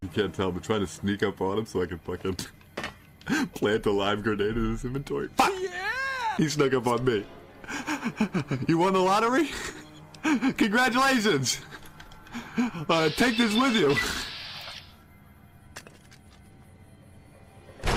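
No technical faults can be heard anywhere in the audio.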